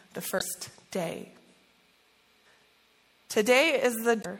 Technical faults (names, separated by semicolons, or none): MP3 compression; damaged data in a compressed stream